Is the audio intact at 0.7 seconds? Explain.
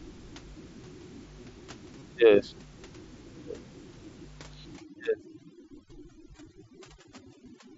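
Yes, the audio is intact at 0.7 seconds, with no fault there.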